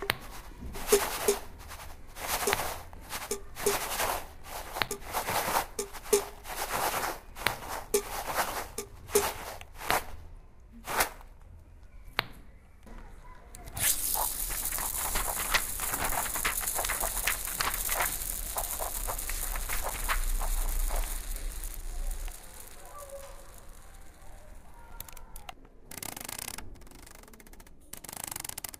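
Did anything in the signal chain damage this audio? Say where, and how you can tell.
Yes: gaps between chunks at 4.88, 9.88, 14.89, 19.90 and 24.91 s, each a hole of about 7 ms with hard edges, recurring every 5 s. The damage happened where the audio was split for transfer or storage, or at playback. Silence was inserted at each chunk boundary, from padding or a late start on the next chunk. No material is missing, but the sound is broken at each join, and the strict 5 s spacing gives it away.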